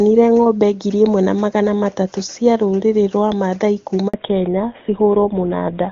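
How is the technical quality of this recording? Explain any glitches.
The recording has two linked faults near the end, both caused by the call changing networks.

The handover gap runs from 4.08 s to 4.14 s, lasting 60 ms. The call was being passed from one network to another. No speech frames arrived during the switch. The audio fades out within a few tens of milliseconds and drops to silence. Whatever was said in that window is lost, not muffled. The result is a short, clean hole in the speech.

The fallback to narrowband starts at 4.14 s and continues to the end of the clip. After the handover, the call came back on an older narrowband codec, likely GSM full rate. Before the switch, the speech was HD Voice with faint or no codec damage, consistent with AMR-WB at its top rate. After it, nothing above 4 kHz remains. The speech loses its crisp sibilants and airiness. It sounds duller, boxier and rougher.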